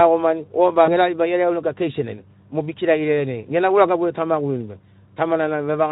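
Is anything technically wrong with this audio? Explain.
Yes. At 0.85 to 0.92 s, just before "era ribai", there is VoIP packet loss concealed by the speech codec. About 20 ms of audio, which fits a single lost frame, went missing. The decoder filled it by repeating its last pitch and filter shape at falling gain, then needed a few more frames to recover. It is heard as a brief stretched sound that fades. On a waveform it shows as near-identical repeating cycles that shrink. On a spectrogram, the harmonic stripes run flat and fade before normal detail resumes. The Speex coding, which fits a rate around 15 kbps, leaves only light coding damage around this.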